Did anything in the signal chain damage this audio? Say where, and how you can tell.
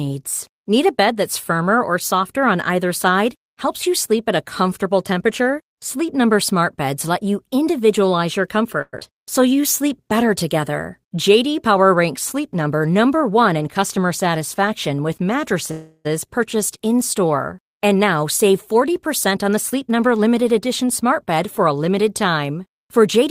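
Yes. Network-side delivery problems and the receiver's jitter buffer reacting to them damaged this speech at five points.

Long network dropout, 8.81 to 9.03 s. The last sound is stretched into a fading buzz for about 0.2 s, then about 30 ms of near-silence, and the speech resumes with roughly 80 ms of it gone. A burst of packets was likely lost in the network. The receiver concealed the gap by extending the final audio, and the lost stretch was never played. The playout delay shifts by roughly 50 ms around this point.

Jitter buffer slow-down, 9.12 to 9.62 s. Right after the dropout the speech drags to 92% speed with the pitch unchanged, and sounds are drawn out. This is the buffer rebuilding its reserve. It repeated single pitch periods and bits of pauses over and over, adding about 48 ms in total. The tempo sags without any drop in pitch, which is the sign of time-stretching in the buffer rather than a slowed clock.

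Jitter buffer speed-up, 12.67 to 13.98 s and 17.88 to 21.86 s. The speech runs hurried at the same pitch, at 107% speed in the first stretch and 106% in the second. The buffer was holding more audio than its target, so it cut short pieces of one or a few pitch periods in repeated steps. It removed about 100 ms in the first span and about 200 ms in the second. The rushed pacing with no pitch rise gives this away.

Call audio freeze, 15.71 to 16.07 s. The sound hangs as a fading buzz for about 334 ms, ending in roughly 20 ms of near-silence. The speech then picks up exactly where it stopped, with nothing missing. Packets were likely held up in transit, not lost, so the jitter buffer ran empty and the receiver concealed the wait. The playout delay grows by 334 ms at this point.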